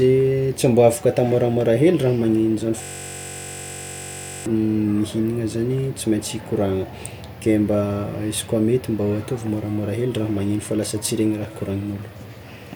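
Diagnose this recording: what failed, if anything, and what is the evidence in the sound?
System hang loop, 2.82 to 4.46 s, just after "magnegno zany": a 21.33 ms slice repeats about 77 times, heard as a steady 46.9 Hz buzz. Driver or buffer stage: the host froze while hardware kept replaying its ring buffer, which fits a 1024-sample buffer.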